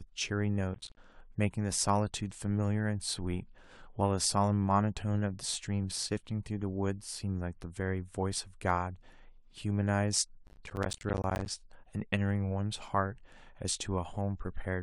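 Processor overload crackle appears from 0.74 to 0.97 s and from 10.47 to 11.5 s. Missed buffers of around 10 ms drop to silence, giving gritty tearing.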